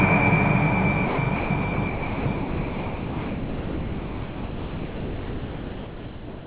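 At 1.06–1.18 s, 1.36–1.5 s, 1.62 s, 1.74–1.78 s, 1.88–2.26 s and from 2.36 s to the end, the sound gives way to steady noise or near silence, likely sound dropped by the voice detector and filled with comfort noise. Unlike packet-loss concealment, nothing is repeated or smeared. The content simply vanishes.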